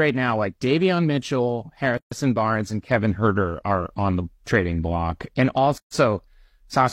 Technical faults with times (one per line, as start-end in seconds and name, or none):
1.97-2.11 gap at a join of encoded pieces
5.78-5.92 gap at a join of encoded pieces